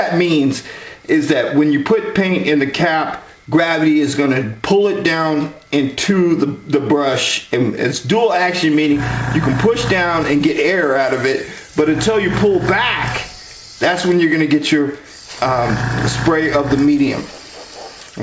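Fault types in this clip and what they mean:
No faults found; the audio passed through a call path with G.722 coding at 64 kbps, which leaves nothing above 8 kHz.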